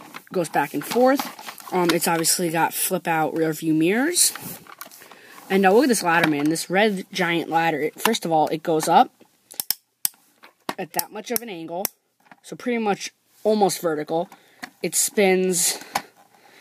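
From 1.41 to 4.56 s, pre-emphasis is left on: the treble boost, fitting a 50/15 µs curve, lacks its matching cut, lifting 10 kHz about 8 dB above 1 kHz. The sound turns thin and bright.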